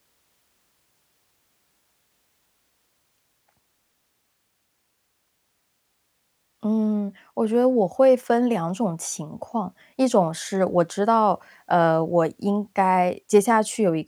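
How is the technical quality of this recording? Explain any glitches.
No glitches turn up anywhere in the recording, so there is nothing to explain.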